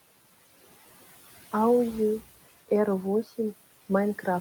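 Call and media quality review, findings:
Noise suppressor artifacts throughout: background drops between phrases, swells back under speech. Suppressor cutting steady-noise bands by about 15 dB per frame. Room noise sits about 20 dB below speech.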